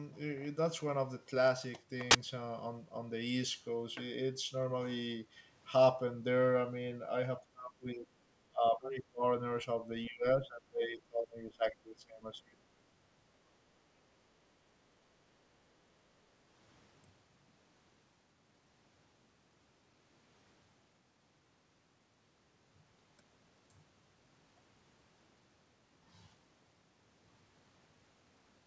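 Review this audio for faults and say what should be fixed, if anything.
At 2.11 to 2.15 s a sharp, loud 40 ms blast of harsh digital noise cuts across the speech. This is an uninitialised buffer: a block was sent to playback before any audio had been written into it, so whatever stale memory it held came out as samples. To prevent it, zero-fill output buffers on allocation and never release a block to the device until the audio for it has been written.

The speech sinks and thins in patches at 7.4 to 8.07 s, 8.49 to 9.23 s and 10.09 to 12.61 s, dropping by about 30, 25 and 20 dB at its deepest. This is likely speech suppressed in double talk: with both ends talking, the echo canceller could not tell the near talker from loudspeaker echo and attenuated everything. To prevent it, tune the canceller's double-talk detection so it keeps the near-end signal instead of suppressing it, and give its adaptive filter enough length to converge. 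Throughout, there is no content above 8 kHz, which fits the wideband call codec on the path.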